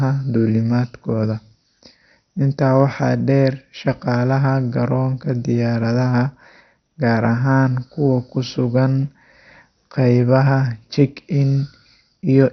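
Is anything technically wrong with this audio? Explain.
Yes. Throughout the speech there's heavy damage that likely comes from MP2 compression at a starved bitrate, around 48 kbps. Upper sub-bands get switched off, leaving nothing above 6.2 kHz, and the surviving bands flicker and are coarsely quantised, giving a dull, gurgly, grainy sound.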